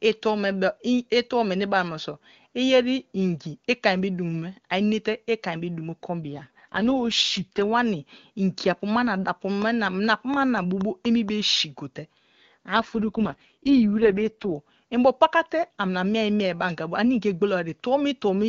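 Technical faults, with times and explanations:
6.22–7.62 s, AMR rate drop: the codec falls from 23.85 to 6.6 kbit/s, its lowest wideband mode, as the network trades speech bits for error protection on a weak link. The bandwidth holds and nothing drops out, but the speech turns rough, raspy and synthetic.
9.62–11.30 s, train of clicks: about seven evenly spaced pulses at roughly 4.2 per second, peaking about 5 dB above the speech, give a steady ticking over the sound. Nearly identical clicks at a regular pace point to a likely electrical interference or a faltering interface.
12.73–14.56 s, AMR rate drop: again the rate is cut from 23.85 to 6.6 kbit/s while link protection takes priority. With far fewer bits to model the vocal tract and its excitation, the speech sounds coarse and buzzy, then clears once the higher rate returns.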